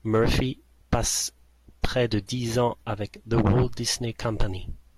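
Speech recording with no audible technical faults anywhere in the clip.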